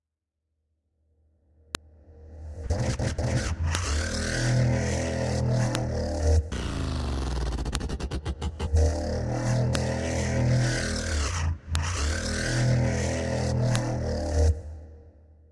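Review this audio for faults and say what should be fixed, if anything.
File header played as audio: sharp clicks at 1.75, 3.75, 5.75, 7.75, 9.75, 11.75 and 13.76 s. Each 2-second piece's header bytes play as samples; the strict, signal-independent spacing distinguishes these clicks from random dropouts. Strip each piece's header before joining or streaming the audio.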